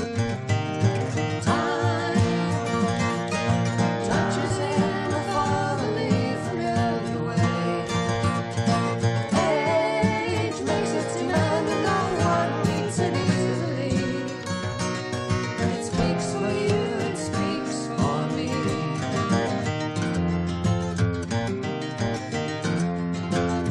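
Damaged data in a compressed stream at 13.22 s and 16.85 s: corrupted frames throw the decoder out of sync, each leaving a brief blip as it searches for the next frame header.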